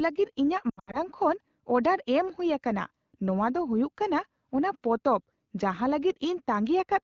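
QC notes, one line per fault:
0.70–0.98 s, lost AMR speech frames. Several brief warbles and dropouts, the longest gap 80 ms. The wideband decoder repeats old settings, then fades fast.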